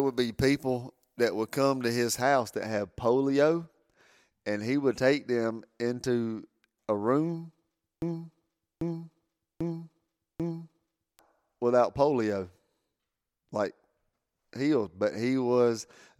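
A speech recording with two faults. From 0.0 to 2.2 s, up to "that had polio", pre-emphasis was left on: the treble boost matches a 50 µs FM curve, and the matching de-emphasis was never applied. At 10 kHz the sound sits about 11 dB above 1 kHz, so it comes across thin, bright and sibilant. A spectrogram shows an unusually dense, dark upper band. From 8.02 to 11.19 s, after "them into a room" and before "without polio", a broken-record loop repeats one 0.79 s fragment exactly, back to back, four times, and the audio for that stretch is lost. The likely cause is a stalled player or stream re-sending its last buffer. On the waveform this appears as identical repeating blocks, and on a spectrogram as a tiled pattern.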